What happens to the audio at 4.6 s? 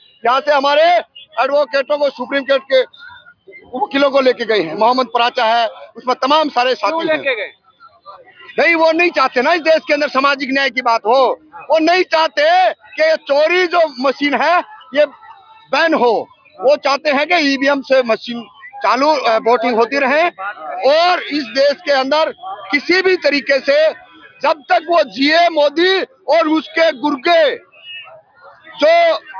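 Nothing goes wrong at 4.6 s; the audio plays through that moment intact, with no dropout, click or distortion.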